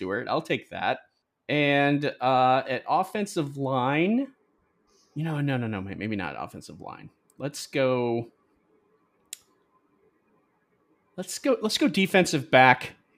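Listening through this speech recording, nothing stood out as a technical problem at any point.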